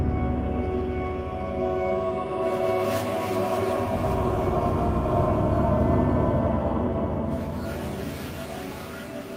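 No technical faults are audible anywhere in the recording.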